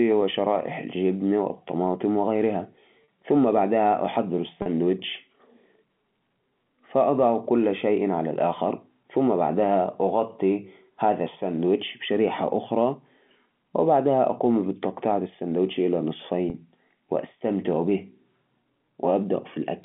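At 3.04, 4.62 and 16.5 s there's packet loss with pitch repetition: 40 ms gaps, which fits two 20 ms packets going missing each time. The receiver loops the last pitch period to bridge them, so the speech briefly hangs on a slightly buzzy tone.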